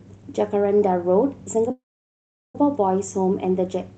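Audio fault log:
1.71–2.56 s, call audio freeze: the speech halts, a brief fading buzz carries on the last sound, then about 0.75 s of silence follows before speech resumes from exactly where it stopped, with nothing skipped. The likely cause is packets held up in transit, leaving the jitter buffer empty while the receiver filled the wait. Unlike a dropout, no speech is lost. The 0.83 s gap is inserted, pushing everything after it later.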